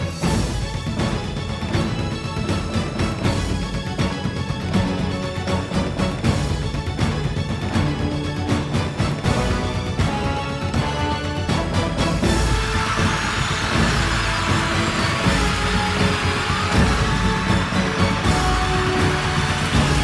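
From start to finish the audio is played back at a higher rate than it was captured at, with no conversion between the two, a wrong sample rate fault. A 1.5 times speed-up fits material recorded at 16 kHz being played at 24 kHz. Because speed and pitch are tied to the same clock, everything runs one and a half times too fast and sits about 7 semitones high, giving the whole sound a hurried, shrill, chipmunk-like quality.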